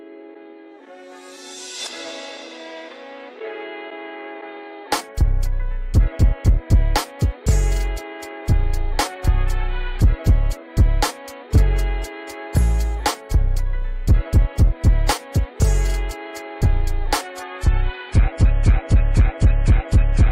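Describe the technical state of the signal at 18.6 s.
At 18.6 s you're inside an adaptive stream at a lower bitrate stretch, 17.24 s to the end: the quality drops suddenly without a gap, artefacts rise and nothing's left above 12.9 kHz, which fits a slowed connection forcing a fall to a much lower-bitrate version.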